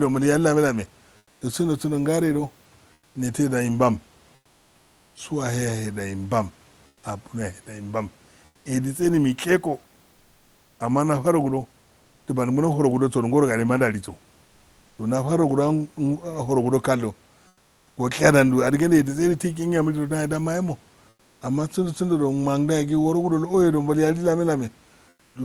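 At 1.17–1.41 s, 2.93–3.15 s (just before "nesedo imban"), 4.35–5.15 s (just after it), 6.87–7.03 s, 8.45–8.65 s (before "edise do mishe go"), 17.47–17.97 s, 21.09–21.41 s and 25.09–25.35 s, comfort noise replaces the background. The quiet room noise in the pauses drops by about 4 to 6 dB and becomes a smooth, featureless hiss. This is likely Opus DTX synthesising noise at the receiver. Unlike a gate or dropout, the pause never falls to true silence.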